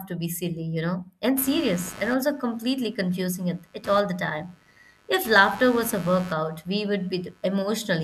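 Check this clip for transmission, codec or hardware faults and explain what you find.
One hardware fault is present. From 1.37 s to the end, computer activity noise appears: load changes in the host computer modulate the audio circuit's shared ground, adding a buzzy chirping pulse near 100 Hz, roughly 20 dB below the speech, that follows the machine's activity rather than the speech.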